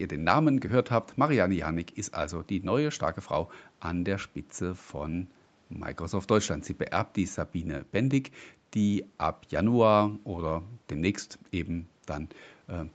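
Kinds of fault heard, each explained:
No faults are present: the speech carries the normal character of call audio, shaped by call microphone processing and a WebRTC call path whose codec leaves nothing above 8 kHz.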